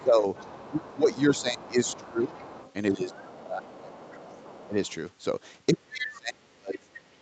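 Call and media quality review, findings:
Speech suppressed in double talk: talker ducked 0.00–2.37, 2.91–4.05, 4.67–4.76, 5.73–7.21 s, deepest about 35 dB near the end. Likely echo canceller gain reduction during overlap, tracking the far side rather than packet loss.

Other side's voice leaking through: second voice 0.00–4.89 and 5.97–6.18 s, about 25 dB under the talker. Likely residual echo the canceller failed to remove, distinct from room reverb because it is a separate voice.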